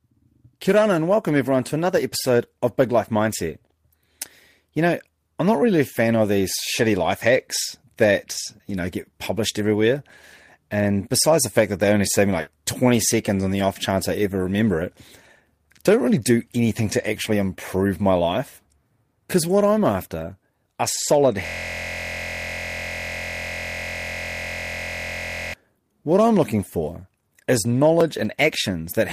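Speech, with three distinct faults. At 12.41 to 12.49 s there is a burst of packet loss. The receiver bridges about 60 ms by extending the last sound and fading it, so it is heard as a held buzz or dying hiss. Another 60 ms of the talk is simply gone, so the speech resumes further along. On a spectrogram the harmonics freeze into flat horizontal lines that fade before the new speech jumps in abruptly. At 17.25 to 17.31 s a lost packet is rebuilt from error correction. About 40 ms, consistent with two lost packets each recovered from the low-bitrate copy carried by the following packet, plays without any gap but sounds rougher and grainier. On a spectrogram this appears as a short smeared, noisier patch with less clean harmonic structure, and the waveform stays continuous. From 21.46 to 25.54 s a system hang loop takes over. The machine or its driver stalled while the audio hardware kept cycling one 23.22 ms piece of its ring buffer, which fits a 1024-sample buffer, about 175 times. 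Repeating at 43.1 Hz, the result is a steady rasping buzz rather than speech. A waveform shows one identical short segment tiled end to end for four seconds, and a spectrogram shows evenly spaced vertical stripes or harmonic lines at multiples of 43.1 Hz.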